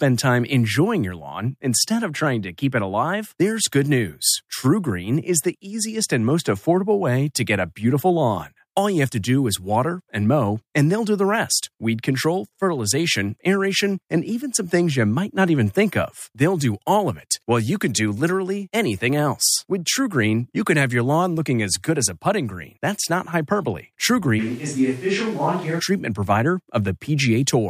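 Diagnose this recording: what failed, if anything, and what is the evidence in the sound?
From 24.41 s to 25.78 s the speech turns roomy and hollow in an instant. The bass thins out. The level drops by about 5 dB. Room noise rises to roughly 25 dB below the speech. At 25.78 s the close sound returns just as abruptly. The failure sits at the capture stage. The most likely cause is a switch to a distant microphone after the close microphone's signal dropped out. The distant microphone picks up more reflections and ambient noise along with the speech.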